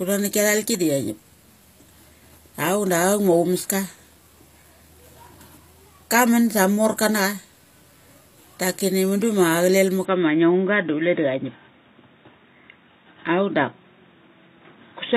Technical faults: HE-AAC compression; input switched to a poorer device

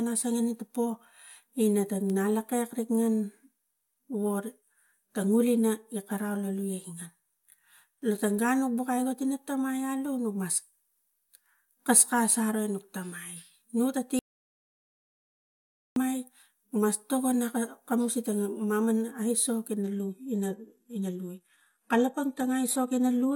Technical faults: audio dropout to silence; adaptive stream at a lower bitrate

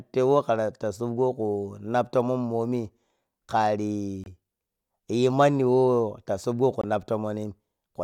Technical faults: Bluetooth dropout

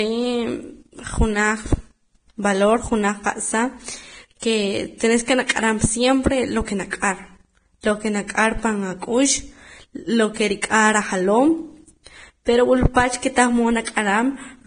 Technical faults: Vorbis compression

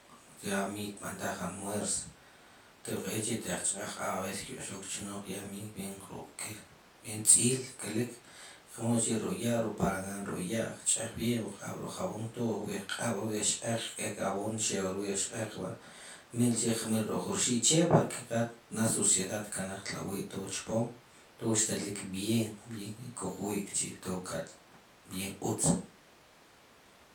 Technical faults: none

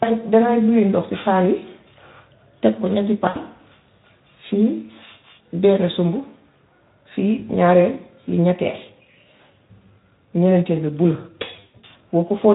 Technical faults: VoIP packet loss concealed by the speech codec

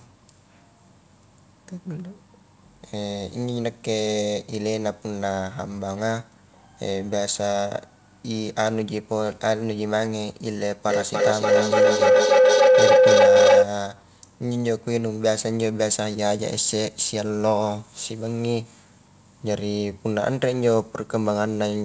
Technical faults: feedback howl

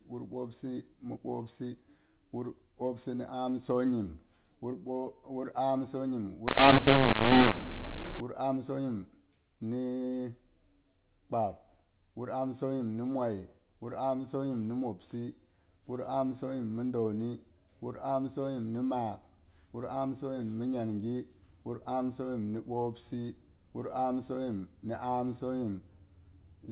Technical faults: mu-law and A-law mixed up

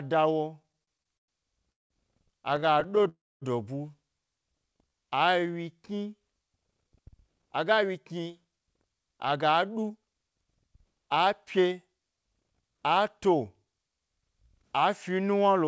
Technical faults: repeated stalls (stutter); call audio freeze; jitter buffer slow-down; jitter buffer speed-up

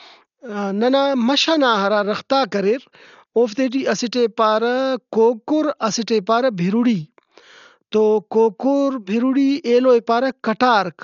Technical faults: Dolby Digital compression

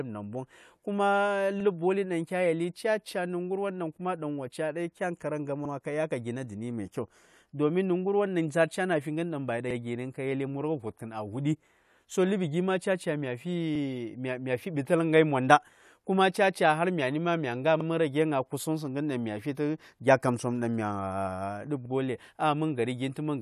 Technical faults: overlapping chunks

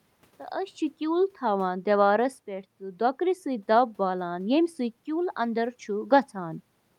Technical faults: none

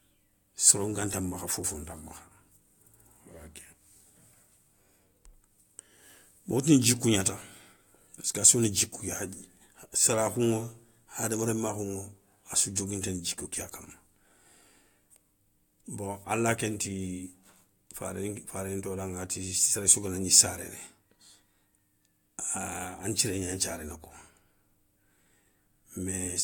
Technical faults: none

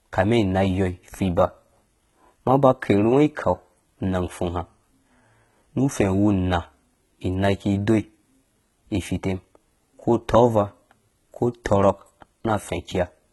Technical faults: HE-AAC compression

